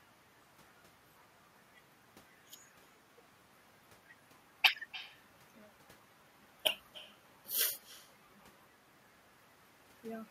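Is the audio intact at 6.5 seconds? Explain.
No. Echo with no canceller runs throughout the clip. The far end's loudspeaker feeds its microphone, so the talker's voice returns roughly 0.3 s later, about 18 dB quieter and thin.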